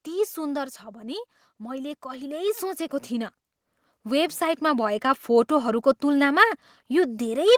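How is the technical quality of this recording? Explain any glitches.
The recording is marred by repeated level pumping from automatic gain control, which audibly raises and lowers the whole signal in the first five seconds.

From 0.05 to 1.19 s there is automatic gain falling. The control judged the input too loud and eased its gain down by about 6 dB over roughly a second. The speech starts loud and sinks steadily. The background drops along with it, which is what separates this from a talker simply speaking more softly or turning away.

Automatic gain rising follows twice, from 1.58 to 3.39 s (about 7 dB) and from 4.04 to 5.07 s (about 4 dB). Each time the control found the level too low and pushed the gain up gradually. Speech and room noise swell together over one to two seconds. A talker raising their voice would lift only the speech, and a fader move would not keep recurring like this.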